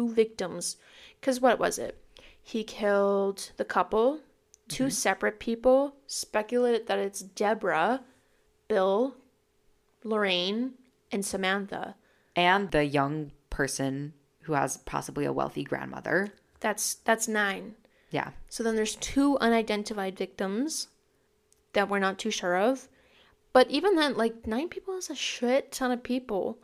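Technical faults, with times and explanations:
No technical faults can be heard in this speech clip.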